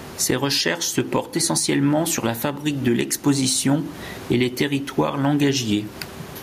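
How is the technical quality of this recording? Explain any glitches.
The recording has one fault, gain pumping, which runs through the whole clip. Throughout, the level swings by around 15 dB. The likely cause is input gain set far too high, with a fast limiter or compressor clamping down on each loud syllable and releasing in the gaps. The room noise, normally sitting about 29 dB below the speech, is part of the recording, and the speech sounds squashed. On a waveform the speech peaks look flattened to a near-uniform height.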